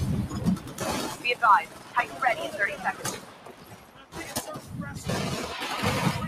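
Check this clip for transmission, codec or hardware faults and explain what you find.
A speech-oriented noise suppressor is processing the whole clip, and three stretches are pulled down noticeably further than the rest.

Noise suppressor applied to music or sounds, throughout: the processor treats sustained, steady content and decaying tails as background noise and attenuates it, while transients pass. Its gain swings by around 15 dB. On a waveform, the envelope dips after each attack. On a spectrogram, sustained partials and reverb tails fade or break up into patchy, fluttering gaps.

Sound cut by the noise suppressor, at 0.58–0.81 s (deepest drop about 8 dB), 1.65–2.22 s (about 9 dB) and 2.93–4.15 s (about 10 dB): in these stretches the suppressor misjudged the sound as noise and clamped it harder. Held or fading material sinks and its decay is cut short, for roughly a fifth of a second, half a second and a full second respectively. 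The waveform shows a visible sag in level, and the spectrogram shows darkened, truncated energy across those spans.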